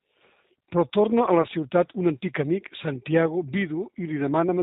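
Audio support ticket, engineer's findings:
G.729 codec, whole clip. Speech band-limited, slightly rough and synthetic, codec damage plainly audible. Spectrogram: hard ceiling at 4 kHz, empty above. Mechanism: 10 ms frames rebuilt from a vocal tract filter, pitch predictor and sparse pulses, which points to an 8 kbit/s G.729A stream.

VoIP packet loss concealed by the speech codec, 1.42 to 1.47 s. Brief stretched, fading sound, then a weak or distorted stretch before normal speech resumes. Consistent with a single lost 20 ms packet. Mechanism: the decoder repeats its last pitch and filter at falling gain, and later frames recover gradually because each builds on the previous one. Spectrogram: stretched content with fading energy. Waveform: dip in envelope.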